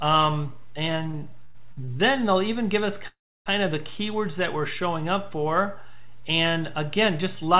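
A constant DC offset runs through the entire clip. The waveform sits shifted away from zero by a fixed amount, so it cannot be heard as such, but it takes up headroom and shows as steady energy at the very bottom of the spectrum. The sound comes through a WebRTC call path whose content stops at 4 kHz, which fits G.711 mu-law at 64 kbps.

From 0.92 to 1.89 s there are repeated stalls (stutter). Packets kept reaching the receiver late or more slowly than they were played, so its jitter buffer emptied six separate times. At each gap the receiver continued the last sound until data resumed, the longest wait being 98 ms. Together these fills add 213 ms, about 22 percent of that stretch. Nothing is lost, but the audio drags and stutters.

From 3.07 to 3.48 s comes a call audio freeze, likely caused by packets being held up in transit until the jitter buffer ran dry. The receiver first extends the last sound as a fading buzz or hiss, then drops to silence for about 300 ms, 383 ms of fill in all. 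When data returns the audio resumes where it stopped, so a gap has been inserted, delaying everything after it by 383 ms, with nothing missing.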